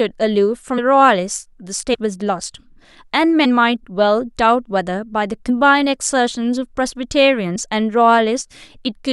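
Speech, with compressed frames skipped at 0.77 s, 1.93 to 1.95 s, 3.44 s, 5.48 s and 7.55 s. At each point the audio jumps forward by a small whole number of frames of about 23 ms, which fits a 1024-sample frame at 44.1 kHz. Each jump loses roughly a tenth of a second, nearer 150 ms at 1.93 s and 70 ms at 7.55 s. On a waveform or spectrogram this shows as a sudden discontinuity in the speech.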